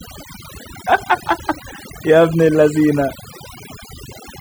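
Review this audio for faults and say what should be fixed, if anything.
Overdone noise removal runs through the whole speech clip. A noise reduction stage was pushed too hard on a noisy source, so any frequency band sitting close to its noise estimate gets pulled far down or switched off, and the softer parts of the speech are cut along with the noise. The background drops and breaks up into twinkling, chirpy specks. Preventing it means setting the reduction amount gently and checking the result by ear against the untreated recording.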